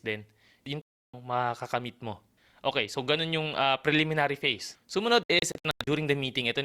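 A digital broadcast dropout at 0.82 s silences the speech for about 0.32 s, to 1.14 s. The receiver stopped getting usable frames and muted until valid ones returned, so that stretch of programme is simply gone. A second dropout from 5.23 s to 5.88 s breaks into several short holes spread over 0.64 s, the longest 96 ms. Each event's missing audio adds up to 320 ms, which points to about ten lost frames.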